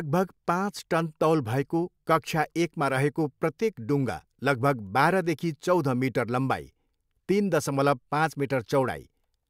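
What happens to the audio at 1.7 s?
Nothing goes wrong at 1.7 s; the speech runs on cleanly through that moment with no dropout, click, glitch or distortion.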